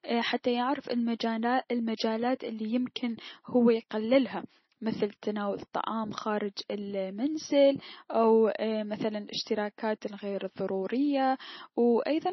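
The whole clip carries heavy MP3 compression damage, likely from encoding at a very low bitrate, with the sound pointing to something around 24 kbps. Nothing is heard above about 5.9 kHz. The treble simply stops there. Starved of bits, the encoder dropped weak frequency lines, and they flicker in and out from frame to frame. The speech sounds watery and swirly. Sibilants turn into metallic chirps, and consonant onsets are smeared.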